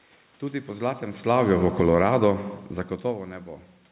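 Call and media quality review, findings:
Automatic gain falling, 1.15 to 2.24 s, right after "po zlatem": level sinks by about 14 dB over roughly a second, room noise dropping with it. Probably the capture-side AGC overreacting to a loud stretch, likely from the talker moving near 1.0 s, and pulling gain down gradually.

Automatic gain rising, 2.15 to 2.72 s: the same AGC flips direction before the fall finishes and swells voice and room noise back up about 9 dB. It's chasing an input drop of about 24 dB as the talker backs off around 2.5 s. The two ramps overlap, so the level pumps down then up.

Band stops at 4 kHz throughout, which fits the G.711 A-law call path.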